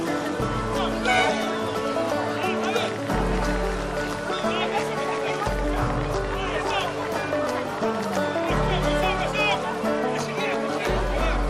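From 2.38 s to 8.76 s a train of clicks ticks over the sound at an irregular pace averaging 11.4 per second, roughly seventy in all. The pulses share one shape, peak a few dB above the signal, and persist through pauses, likely from electrical interference or a struggling interface.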